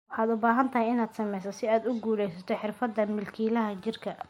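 A speech recording with a block of digital silence at 2.34 s, lasting just under 1 ms. The sound cuts out with no fade, so it sounds like a tick. On the waveform that's a brief flat line, and on the spectrogram a thin vertical broadband stripe. The usual cause is the program failing to fill the output buffer in time.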